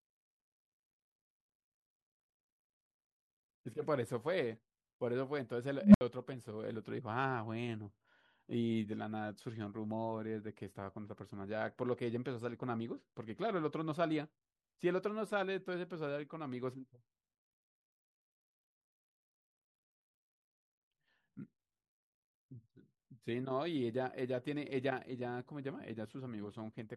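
At 5.80 s a low tone of around 200 Hz rises out of the speech and swells to a harsh, clipped squeal over about 0.15 s, then the audio drops to silence for about 67 ms before the speech returns at 6.01 s. This is an unstable filter: a recursive filter received bad coefficients, so its feedback kept amplifying its own output until it clipped and the arithmetic overflowed, muting the output until the filter reset.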